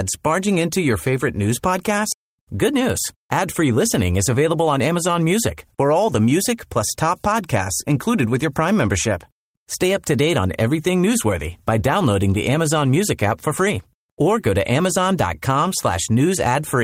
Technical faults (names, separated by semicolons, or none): skip ahead; jitter buffer speed-up